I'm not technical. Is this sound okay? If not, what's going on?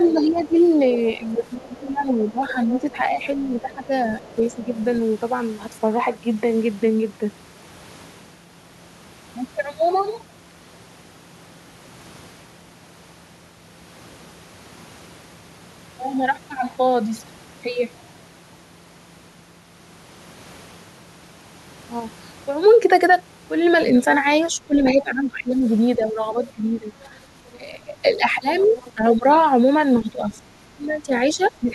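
No. The other side's voice leaking through is heard at 0.08 to 0.4, 1.43 to 4.84, 27.04 to 27.08 and 28.6 to 28.91 seconds: a faint second voice well below the main talker. The likely cause is the talker's loudspeaker being picked up by their microphone without being fully cancelled.

Speech suppressed in double talk occurs from 0.12 to 4.71 seconds and from 24.57 to 31.71 seconds. The talker's voice dips or drops out in patches, about two seconds in total in the first stretch and three in the second. This likely happens because both sides spoke at once, so the echo canceller turned everything down.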